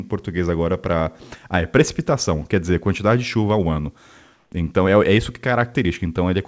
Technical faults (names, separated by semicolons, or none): comfort noise in place of the background